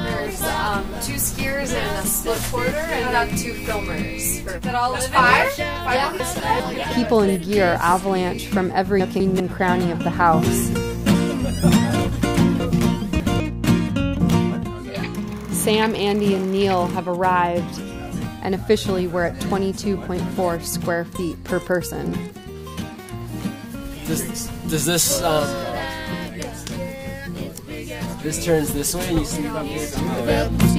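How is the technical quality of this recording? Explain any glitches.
There are three short spots where the audio gets scrambled, all chunks out of order. At 6.2–6.6 s and 9.0–9.4 s, a 200 ms chunk plays one slot late and swaps places with its neighbour. At 12.6–13.4 s, one chunk lands three slots late. Nothing is missing, but each spot has hard joins that briefly jumble the sound.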